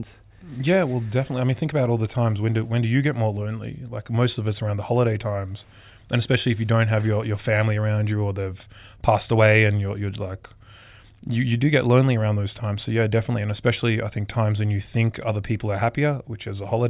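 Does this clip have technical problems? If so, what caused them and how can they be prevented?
No, no technical faults audible.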